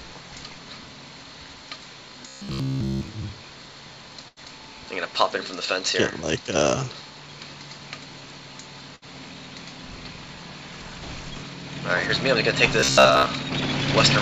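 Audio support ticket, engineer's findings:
Rigid metallic buzz at about 66.8 Hz, 2.28–3.08 s (throughout) and 12.80–13.26 s (most of the span). Likely receive-side underrun: a roughly 15 ms buffer replayed repeatedly while real audio is skipped, so the repeat rate imposes a fixed pitch. Robotic sound from repeated short buffers.

Last sound held and fading out, then a jump forward. At 4.28–4.40 s, 86 ms concealed and 90 ms of audio gone. At 8.96–9.05 s, 61 ms concealed and 60 ms gone. Burst of packet loss: the jitter buffer extrapolated the last sound while attenuating it, then resumed downstream. The G.722 call path, at 64 kbps, shows its 7 kHz band limit.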